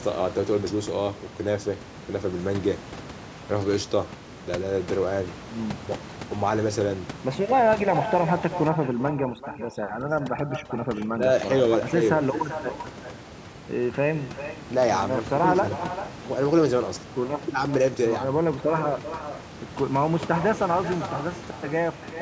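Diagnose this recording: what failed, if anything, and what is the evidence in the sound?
Echo with no canceller, at the call-processing stage, runs throughout. A copy about 11 dB quieter trails the speech by roughly 0.4 s, played by the far loudspeaker, picked up by its microphone and returned.

Overdone noise removal hits from 8.69 to 11.36 s. Background drops and breaks up into twinkling specks as bands near the noise estimate are cut.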